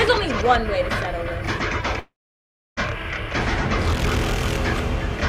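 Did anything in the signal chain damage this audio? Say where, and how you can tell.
Yes. From 1.99 s to 2.80 s, a long network dropout likely occurred. About 0.78 s of audio is missing. The receiver's concealment stretched the last sound into a fading buzz or hiss, leaving roughly 0.68 s of silence before the audio resumes further on, with the lost portion skipped. A waveform would show the envelope tapering to a flat line, and a spectrogram would show smeared, repeating bands dissolving into an empty gap.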